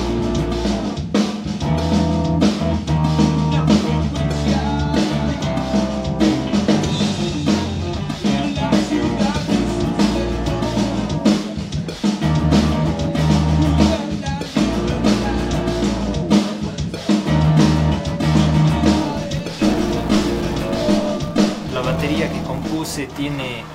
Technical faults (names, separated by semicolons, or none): filter restarted on every block